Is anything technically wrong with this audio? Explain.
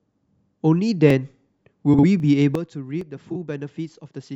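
Yes, there are three kinds of fault.

Dropped samples at 1.10, 2.20 and 3.01 s: a tiny gap, likely under a millisecond of lost samples, makes the waveform jump, heard as a single sharp click each time.

Frames out of order from 1.93 to 2.04 s and from 3.30 to 3.36 s: neighbouring blocks of about 46 ms and then about 23 ms were decoded in swapped order. Each stretch sounds like a brief garbled flutter.

A sudden gain jump at 2.55 s: the level drops by about 12 dB with no ramp, likely from a gain setting applied instantly. Sound and background noise fall together and stay lower to the end.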